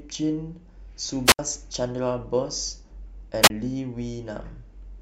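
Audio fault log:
1.25–1.39 s and 3.42–3.50 s, wireless microphone squelch dropout: radio signal faded, receiver squelch muted the output, so hiss rises, speech cuts for about 71 ms then 27 ms, and returns.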